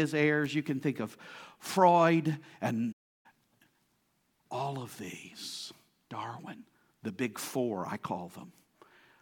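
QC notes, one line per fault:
2.92–3.26 s, playback stall: the speech cuts to silence mid-flow for about 320 ms, then carries on. The gap likely comes from the player running out of buffered data or having its output thread blocked, so nothing reached the output until it recovered.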